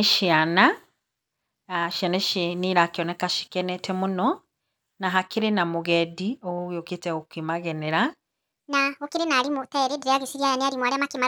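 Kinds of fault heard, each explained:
Section at the wrong speed: from 8.6 s to the end, the speech abruptly turns high and hurried, running 1.49 times too fast and roughly seven semitones sharp. Pitch and tempo jump together, likely because this stretch was played against the wrong clock.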